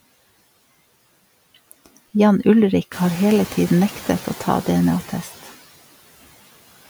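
Throughout the speech, noise suppressor artifacts are audible. Steady background noise is pulled down by about 16 dB, frame by frame. It dips between phrases and swells back under the voice.

Around 3 seconds the room noise jumps by about 12 dB. From 2.91 to 3.66 s the noise suppressor is catching up. Its noise estimate trails the jump, so the louder noise gets only about 5 dB of reduction at first. It then sinks over roughly 750 ms as the estimate adapts.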